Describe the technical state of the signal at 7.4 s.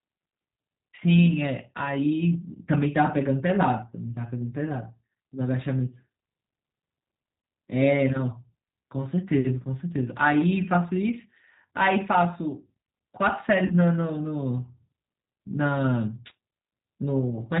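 A single lost VoIP packet, concealed by the speech codec, leaves a 20 ms gap from about 7.42 to 7.44 s. That fits one missing packet. The decoder fills it by repeating its last pitch and filter at falling gain, producing a brief, fading buzzy tone or coloured noise. Because each frame builds on the previous one, the audio stays weak or distorted for a short while after the packets resume.

Underneath, the G.729 codec at 8 kbit/s rebuilds speech from a vocal tract filter, a pitch predictor and a few pulses per frame, discarding everything above 4 kHz. The result at this moment, as throughout, is band-limited speech with a plainly audible rough, synthetic quality.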